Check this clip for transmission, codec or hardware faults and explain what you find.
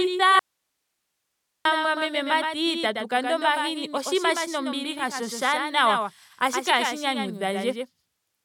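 Two faults are audible in this speech clip.

From 0.39 to 1.65 s there is an audio dropout to a faint residue. The speech cuts off abruptly for about 1.26 s, leaving only faint hiss far below the speech level, before it returns at "mati tatu kanda omahini". The likely cause is the signal being lost while the path after the break stayed live.

A doubled audio track runs throughout. A second, dry copy of the speech trails about a tenth of a second behind, a few decibels quieter. It is likely captured again through a slower path.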